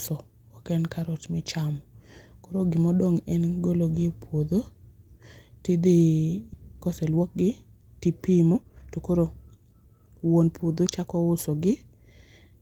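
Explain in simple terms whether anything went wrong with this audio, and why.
At 6.53 s the speech suddenly jumps forward with no pause, as if roughly a second of talking had been cut out and the two ends stuck straight together. This is a skip ahead. The missing stretch was either lost on its way to the listener or thrown away by the jitter buffer, the small waiting area that smooths out delivery. That buffer had newer audio already queued, so playback simply carried on from there.

Right after that, from 6.74 to 7.43 s and again from 8.02 to 11.51 s, the talking sounds rushed, about 10 percent faster, while the pitch stays the same. This is a jitter buffer speed-up. The buffer was holding more than it wanted. To catch up, it trimmed many tiny slices out of the sound, roughly 70 milliseconds in the first stretch and about 0.4 seconds in the second.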